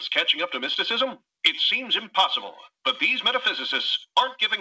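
No technical faults can be heard anywhere in the clip. It has come through a WebRTC call path, and the band stops at 8 kHz, which fits a wideband codec such as G.722.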